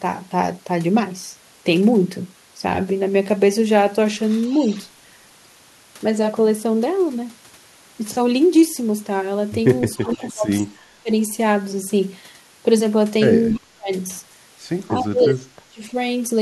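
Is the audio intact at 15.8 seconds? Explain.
No, 15.8 seconds falls inside a stretch of speech suppressed in double talk, from 14.92 to 15.96 s. The speech sinks by up to about 25 dB, likely because an echo canceller, hearing both sides at once, turned everything down.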